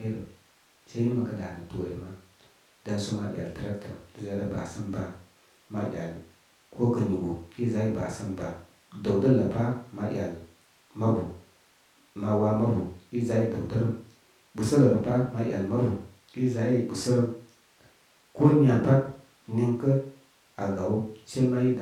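No audible technical faults occur anywhere in this recording.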